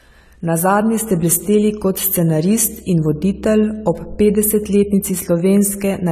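The speech carries audible AAC compression damage throughout, with nothing above 14 kHz and a dull, smeared, warbling texture on sustained sounds and sibilants, likely from AAC-LC coding at a low bitrate, which fits about 32 kbps.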